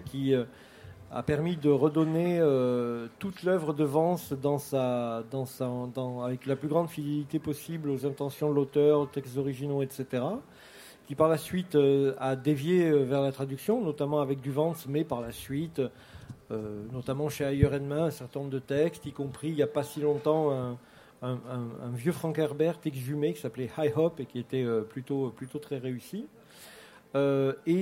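No technical faults can be heard at any point in the audio.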